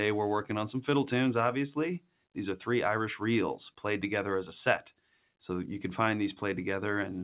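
Between 4.91 and 5.29 s the sound is cut by the noise suppressor, which misjudges part of it as background noise and pulls it down harder than its surroundings, by about 11 dB at the deepest point and over roughly a fifth of a second in total. The sound dips in level. On the waveform the envelope sags there, and the spectrogram shows that stretch fading within a band already topped at 4 kHz, which fits the G.711 mu-law call path.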